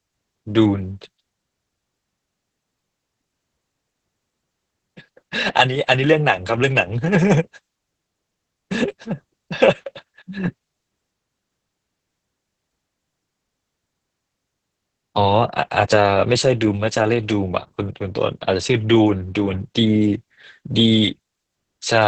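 Opus voice compression runs throughout. Nothing survives above 8.7 kHz, and the speech sounds muffled, hoarse and robotic, which fits heavy SILK coding near 10 kbps.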